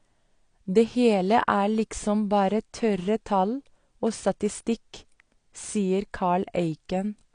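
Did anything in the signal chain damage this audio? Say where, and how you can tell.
Yes, codec stage: speech sounds dull and smeared throughout, nothing above 9.8 kHz. Likely AAC compression, which fits about 32 kbps, too lean to keep the top band.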